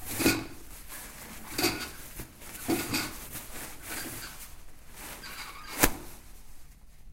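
From the start right through to the end there's a block size mismatch, truncated type. One stage hands over blocks that are longer than the next stage picks up, so the tail of every block gets dropped. You hear it as a steady buzz at about 45.9 Hz, the rate the blocks go by, with blocks written at 1024 samples each. Because those tails vanish, the sound runs about 1.07 times fast, yet the pitch stays close to normal.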